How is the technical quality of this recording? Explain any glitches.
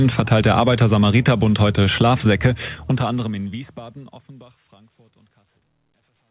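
No glitches or technical faults can be heard here.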